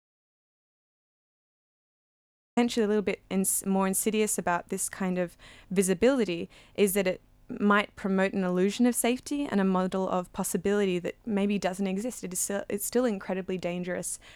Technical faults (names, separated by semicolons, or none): audio dropout to silence